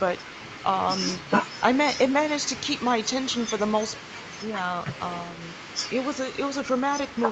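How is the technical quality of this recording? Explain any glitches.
The technical quality holds up, and there are no glitches to explain.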